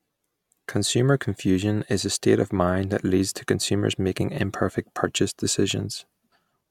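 No technical faults are audible.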